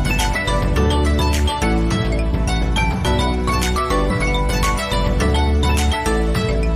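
At 4.07 to 4.11 s, a short stretch of the compressed stream arrives as damaged data: bytes in that region are lost or overwritten, so the decoder cannot read the frames there correctly, loses its place and has to hunt for the next valid frame header before decoding resumes. For the roughly 44 ms this takes, the audio breaks into a brief glitch, a chirp, squawk, click or short hole that does not belong to the surrounding sound.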